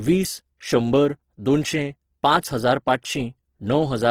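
Throughout, the speech sounds grainy, rough and noisy, likely Opus compression in CELT mode at a rate near 16 kbps, with bandwidth reaching 20.2 kHz.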